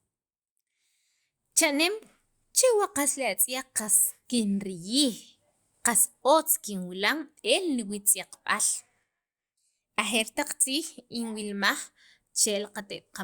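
Nothing here stands out as a technical fault; the recording just runs along with no glitches to point to.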